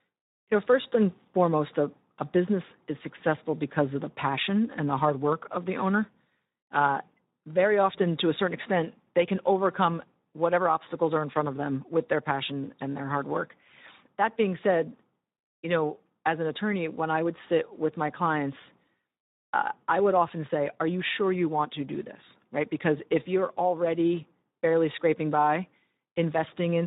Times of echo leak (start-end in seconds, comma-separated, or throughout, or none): none